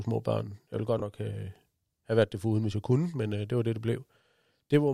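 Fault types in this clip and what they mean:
Chunks out of order: just after "ville godt", a 20 ms chunk plays one chunk late, swapping two slices of speech into a jumble. The waveform shows three abrupt steps at the joins; the spectrogram, thin vertical lines and harmonics jumping back then forward.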